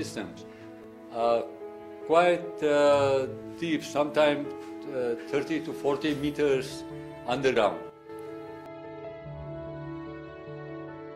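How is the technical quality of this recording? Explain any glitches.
The recording has clear technical glitches: three skips and one brief level drop.

At 0.84, 7.56 and 8.66 s the sound jumps ahead, likely a dropped buffer (overrun) where the hardware overwrote unread samples. Around 20, 70 and 40 ms are lost. The waveform shows an abrupt seam with no gap, and the spectrogram shows a thin vertical broadband line.

From 7.90 to 8.09 s the level falls by about 8 dB and then returns. This is likely a sudden gain jump, where the digital gain changed between adjacent samples without a ramp. Sound and background noise shift together. The waveform shows a step-shaped envelope, and the spectrogram shows a uniformly dimmer band with sharp edges.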